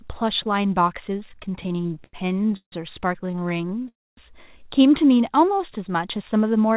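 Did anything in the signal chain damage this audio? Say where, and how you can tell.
Yes. The damage sits in the network and jitter-buffer stage of a call path. The audio itself is band-limited to 4 kHz, which fits a G.711 narrowband codec.

Repeated stalls (stutter) run from 1.2 to 2.74 s and again from 3.26 to 3.83 s. The first span has 23 gaps totalling 465 ms, the longest 156 ms. The second has 13 short gaps totalling 131 ms. Late packets kept draining the buffer, and the receiver stretched the last sound each time, so the sound drags without losing content.

A call audio freeze sits between 3.88 and 4.19 s. About 289 ms of stretched, fading sound is inserted, 240 ms of it effectively silent, before playback resumes where it stopped. This is likely packets held up in transit, leaving the buffer empty for one long wait.

A jitter buffer speed-up covers 5.98 to 6.74 s. The audio plays at 106% speed with the pitch unchanged, so it sounds hurried. 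About 50 ms of pitch-period-sized pieces were cut out to shrink the excess buffer delay.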